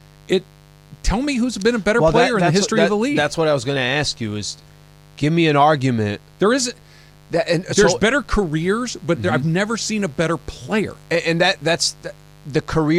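From start to finish, a steady, raspy buzz sits under the speech, roughly 30 dB below it. This is mains buzz on a 50 Hz supply. Sharp switching spikes from something like a dimmer or rectifier, or a missing shield, get into the signal path twice per mains cycle. They give a 100 Hz pulse rate whose harmonics of 50 Hz extend up to several kilohertz, which is where the rasp comes from.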